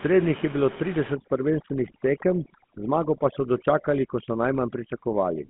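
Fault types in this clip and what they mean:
GSM full-rate codec: The whole clip sits in a narrow telephone band of roughly 150 Hz to 3.5 kHz, with nothing above 3.8 kHz, and the speech carries a plainly audible buzzy, gravelly roughness from pulse-driven vocal-tract modelling, consistent with 13 kbps coding. Simple band-limiting would sound muffled but smooth, without this grit.
Overdone noise removal: From 1.15 s, right after "je bilo", to the end, the room noise that sat about 17 dB below the speech drops and breaks up into twinkling specks, and quieter speech detail vanishes. Unlike the codec roughness, it begins partway through.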